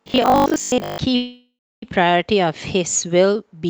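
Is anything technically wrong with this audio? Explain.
Yes, there are two faults in this speech clip.

From 0.02 to 1.0 s there is robotic sound from repeated short buffers. A fixed 50 Hz buzz runs through the speech, which fits a 20 ms block being replayed. The likely cause is audio arriving too seldom, so most of this stretch repeats recent blocks while real audio is skipped, leaving a rigid, metallic tone that only loosely tracks the speech.

From 1.15 to 1.84 s there is a call audio freeze. For 669 ms the last sound is stretched into a fading buzz or hiss that ends in about 0.29 s of silence, likely because delayed packets let the jitter buffer run empty. Playback then resumes where it stopped, so nothing is lost, but everything after is 669 ms late.

The band-limiting to about 8 kHz fits a low-rate Opus call link.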